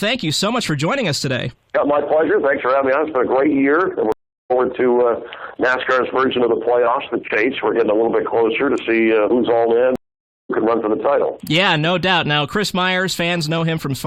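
A stream reconnect occurs twice: the connection drops and the player restarts its decoder mid-stream. From 4.12 to 4.52 s the audio goes silent for 0.38 s, then resumes about 0.4 s further on; from 9.96 to 10.50 s, a 0.54 s gap skips ahead roughly half a second.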